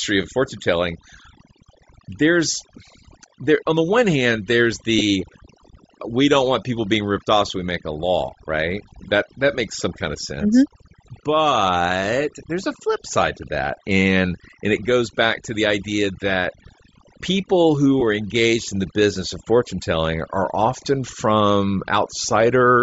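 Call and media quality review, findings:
Overdone noise removal, throughout. Background pushed to near silence with twinkling specks. Spectrogram: dark gaps between syllables sprinkled with isolated time-frequency dots, weak harmonics notched away. Denoiser threshold set too aggressively, gating bands near noise estimate.

Grainy, breathy edge on speech throughout, plainly audible. Spectrogram: upper band thinned, patchy noise-fill texture replacing harmonics, blocky time structure fitting 10 ms frames. Likely Bluetooth LC3 compression at a low rate, consistent with roughly 32 kbps.

Lost LE Audio frames, 4.99–5.02 s, after "the one hand there's". Brief noisy smear replacing speech for about 20 ms, fitting two 10 ms frames. Decoder concealment reusing last spectrum with randomised signs. Spectrogram: short smeared column; waveform: noise-like patch. Same at 18.00–18.03 s, between "people who" and "are engaged in the".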